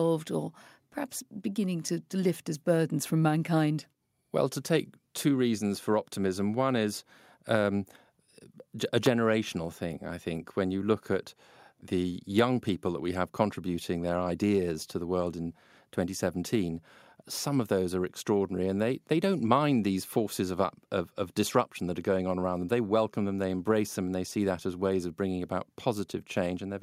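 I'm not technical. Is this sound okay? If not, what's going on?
No. There are two sharp snaps on top of the speech, one at 1.89 s, between "or perhaps beginning" and "to lift as burdens", and another at 9.06 s. This is an electrical switching spike, likely a nearby switch or motor sparking and the recording line picking it up.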